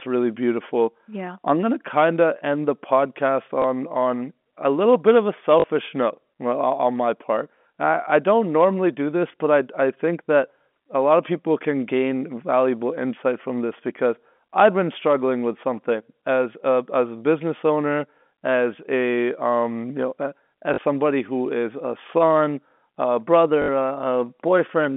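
Packet loss with last packet repeated occurs at 3.62–3.64 s, 5.60–5.64 s after "little bit of a", 20.74–20.78 s before "somebody who is a", and 23.62–23.68 s after "is a son a". Each gap was filled by replaying the previous chunk of G.711 telephone-band audio, producing a small blip at 3.62 s and a brief robotic stutter in the longer runs. On a waveform the repeats appear as identical 20 ms blocks. On a spectrogram, the longer runs show a 50 Hz buzz consistent with 20 ms packets.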